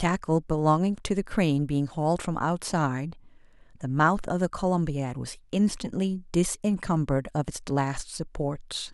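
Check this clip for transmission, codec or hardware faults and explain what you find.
Nothing turned up worth flagging here; I listened through the speech and didn't hear anything going wrong along the way.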